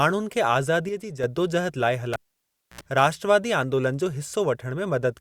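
A speech recording with two separate faults. From 0.89 to 1.24 s the level suddenly sinks by about 6 dB and then jumps back, a clean step down and up rather than a fade. The likely cause is one channel dropping out of a stereo feed, so the mono sum carries only half of what both sides shared while anything unique to the missing side vanishes. Then at 2.13 s a pop breaks in and the sound goes almost silent for about 0.63 s, including a short burst of 60 Hz mains buzz lasting about 71 ms. A second pop comes as the speech returns at 2.81 s. That sequence is a cable pulled and plugged in while live. Breaking the connection gives the first click and the gap, the bare tip touching the socket before the ground connects lets hum onto the line, and full contact gives the closing pop.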